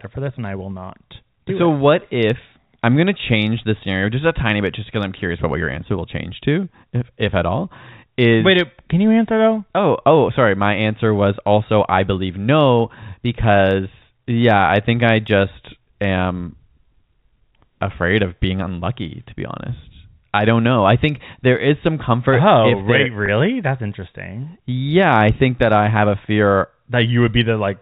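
At 23.26 to 23.28 s the speech briefly sounds held and slightly buzzy, a tiny sustained note. This is packet loss with pitch repetition: about 20 ms of audio went missing, consistent with a single lost packet, and the receiver bridged the gap by repeating the last pitch period over the G.711 telephone coding.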